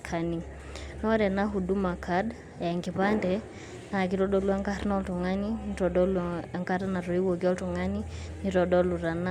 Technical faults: none

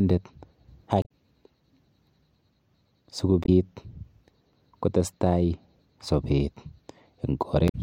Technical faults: damaged data in a compressed stream

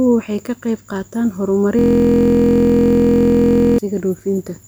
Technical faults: system hang loop

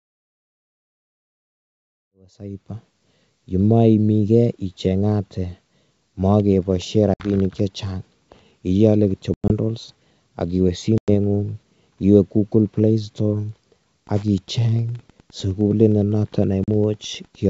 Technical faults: packet loss on an ADPCM call; Wi-Fi interference

